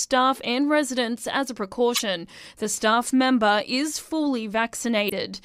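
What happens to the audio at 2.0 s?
Damaged data in the compressed stream, from about 1.92 to 2.01 s, corrupts the frames there. The decoder misreads or rejects them, loses sync and hunts for the next valid frame header, producing a brief chirp, squawk or blip lasting roughly 84 ms.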